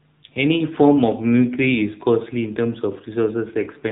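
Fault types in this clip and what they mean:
AMR narrowband mobile codec: the speech passes through an 8 kHz mobile codec that drops everything above 4 kHz. At what sounds like about 7.4 kbps it gives a plainly buzzy, synthetic tone.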